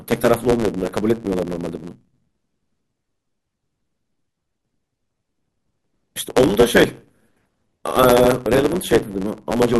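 Speech with a block size mismatch (truncated) running through the whole clip. A steady buzz at 109 Hz sits under the audio, marking the rate at which blocks are handed between stages. Each block arrives longer than the receiving stage reads, so its tail is discarded every cycle. Those repeated cuts produce the buzz and shorten the timeline, and the speech plays about 1.09 times fast while its timbre stays.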